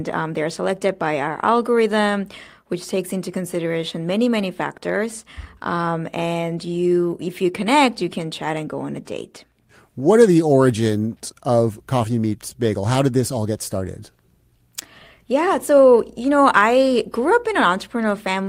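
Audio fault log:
No fault is heard in this speech clip.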